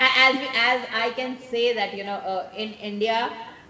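Speech runs through a call path whose top end stops at 8 kHz, which fits G.722 wideband coding. Throughout, an echo with no canceller trails every phrase: a distinct, thinner copy about 16 dB down arrives roughly a fifth of a second later, a separate repeat rather than the smeared tail of room reverb.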